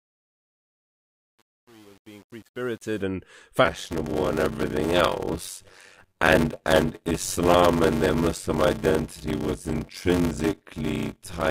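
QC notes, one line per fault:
0.0–3.02 s, truncation distortion on the fade: The fade-in rises smoothly in level, but the quiet part sounds gritty and grainy, worst from 0.0 to about 2.82 s. The gain stage seems to be keeping only 8 bits with no dither. Near the bottom of the fade the waveform collapses into a few coarse square steps instead of tapering cleanly.
3.64–11.51 s, block size mismatch (padded): From 3.64 s to the end there's a steady buzz at 93.8 Hz. The sound also drags along at 0.625 times normal speed while keeping its usual timbre. Each block being read has a stretch of zeros tacked on after the real audio, so the signal gets chopped at the block rate. The buzz rate fits 512-sample reads at 48 kHz, with about 320 samples of actual audio in each block.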